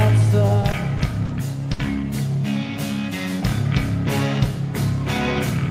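Repeated stalls (stutter) run from 0.47 to 1.31 s: packets arrived late, so the jitter buffer emptied five times, with gaps up to 40 ms. Each time the receiver extended the last sound, 100 ms in all, so nothing is lost but the audio drags and stutters.

A short stall from a late packet follows at 1.73 to 1.81 s. When one packet came 60 ms behind schedule, the receiver held the preceding sound for 60 ms until it arrived and then resumed where it left off, giving a brief stretched hold with a slight buzz or dip.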